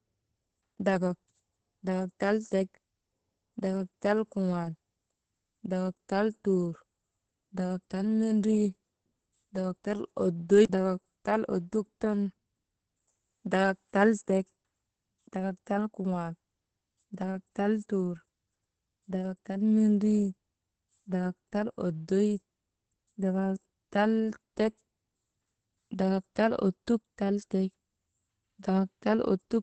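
Throughout the speech, Opus voice compression is running starved, with the SILK coder limiting the band to about 8 kHz and quantising the excitation crudely, which fits a rate near 10 kbps. Voices come out muffled, hoarse and faintly robotic.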